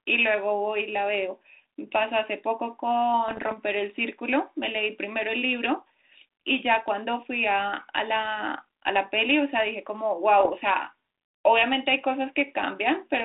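It's a speech clip carried over a narrowband G.726 ADPCM path, band-limited to roughly 300 Hz to 3.7 kHz with the light graininess that fits 32 kbit/s. It has two spells of bit errors on an ADPCM link, from 3.28 to 3.56 s and from 10.40 to 10.51 s, heard as pops and rough, crackly bursts with brief level jumps. A fraction of a percent of bits got flipped, and each one knocks the decoder's step size and predictor off, so the damage smears on for a few milliseconds rather than staying a single click.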